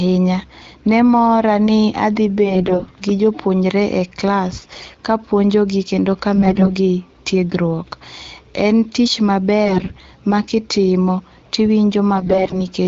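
Through the wideband speech, whose clarity fits a rate around 12.65 kbit/s, AMR bit errors rasp in at 2.45–2.91 s (after "ne mora ni adhi"), 4.59–4.98 s (before "kapuonjogi kendo"), 6.36–6.73 s (after "e klas kapuonjogi kendo"), 9.65–10.06 s and 12.16–12.59 s. Flipped low-priority bits misplace excitation pulses and skew fine pitch, gain and spectral values, so the voice turns hoarse and gargly. Unlike frame loss, there are no gaps or smeared repeats, and pitch and level hold.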